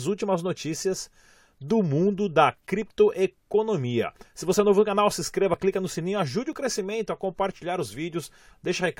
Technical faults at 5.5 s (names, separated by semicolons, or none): overlap between stream segments